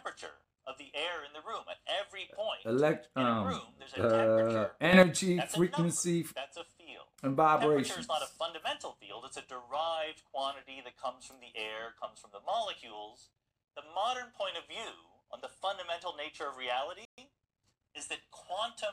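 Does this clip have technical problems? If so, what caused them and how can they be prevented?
Yes, two. At 4.93 s there's a sudden gain jump: the sound and its background noise both leap up by about 9 dB at once, settling by 5.03 s. That's likely a gain setting applied instantly rather than ramped. Smoothing gain changes over a few milliseconds prevents it.

Then at 17.05 s a playback stall cuts the audio to silence for about 128 ms before it picks back up at 17.18 s, likely because the player's buffer ran dry or its thread got blocked. A larger buffer and a higher-priority audio thread would prevent it.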